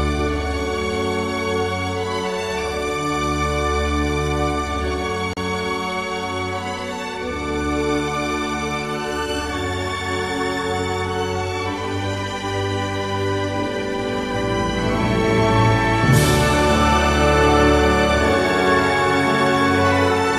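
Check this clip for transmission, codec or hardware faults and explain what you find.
One fault stands out: a gap at a join of encoded pieces, from 5.33 to 5.37 s. The sound drops out in a 35 ms gap, then resumes exactly where it stopped. Nothing is missing, only paused. The cause is two separately encoded segments joined without trimming. Each encoder run leaves start-up delay and end-of-stream padding, and that silence survives the splice. The edges are smeared by the codec, so the fully silent part is shorter than the gap.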